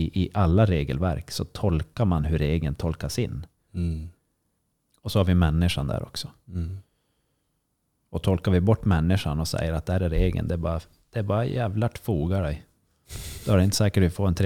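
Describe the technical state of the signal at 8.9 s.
At 8.9 s the speech signal is intact, with no audible dropout, distortion, glitch or other technical fault.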